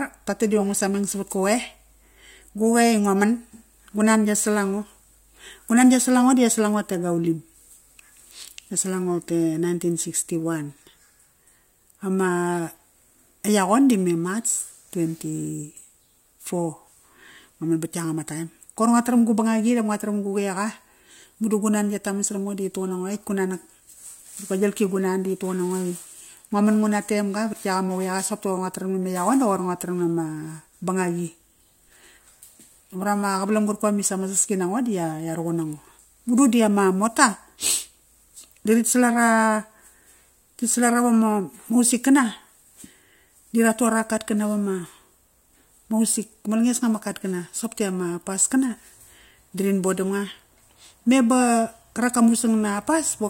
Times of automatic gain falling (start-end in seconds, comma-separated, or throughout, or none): none